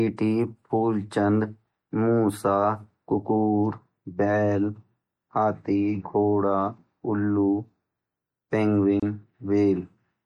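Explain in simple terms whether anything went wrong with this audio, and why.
Yes, a couple of things. The whole clip has that watery, swirly quality, with dull highs and smeared s sounds. That's most likely MP3 compression squeezed too hard, so the encoder dropped the top end and let quiet details flicker in and out.

There's also a gap at a join of encoded pieces: from 9.00 to 9.03 s the speech breaks off in a gap of about 29 milliseconds, then picks up right where it left off. Two separately encoded chunks were stuck together, and the padding each one carries stayed in.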